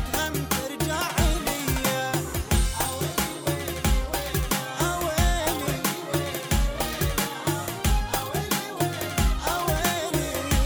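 No technical faults can be heard anywhere in the clip. It runs without dropouts, clicks, distortion or interruptions.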